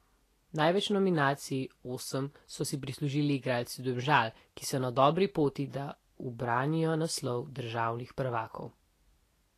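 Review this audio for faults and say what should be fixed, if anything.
The speech has a grainy, hissy edge running the whole way through, and nothing comes through above 14.2 kHz. That pattern points to Vorbis compression, likely at a low setting; the damage is plainly audible and fits something around 34 kbps. At that rate the encoder trims the top end and quantises the remaining treble so coarsely that fine detail turns into noise, roughening tones and softening consonant attacks. Encoding from the original at a higher Vorbis quality setting, or keeping a lossless master, would prevent it.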